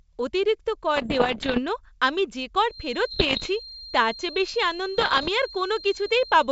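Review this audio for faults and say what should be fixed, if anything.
Bit errors on an ADPCM link occur from 0.96 to 1.60 s, right after "অতিরিক্ত কর", then at 3.11 to 3.48 s and 4.98 to 5.30 s. Each flipped bit throws the decoder's step size and predictor off, so pops and rough bursts with brief level jumps linger. The error rate sounds like roughly one to two percent. Improving the radio or line link, or adding error protection, would prevent them.

A feedback whistle runs from 2.63 s to the end: a thin, steady 4.2 kHz tone about 20 dB below the speech, swelling and fading slowly in level. It is likely loudspeaker sound reaching the microphone with loop gain just short of runaway. Lowering playback gain or adding echo cancellation would prevent it.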